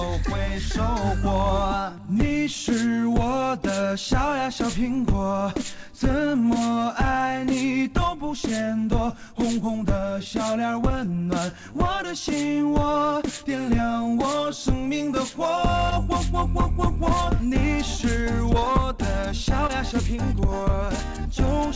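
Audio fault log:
15.90–15.93 s and 19.67–19.71 s, short concealed packet loss: each spot gives a brief smear with a wobble, where the sound seems to stretch for an instant before settling back. About 20 ms of audio failed to arrive in time at each point, so the receiver extended the preceding sound to cover the gap and cross-faded into the returning signal. The call path imposes an 8 kHz band limit, which fits a G.722 link at 64 kbps.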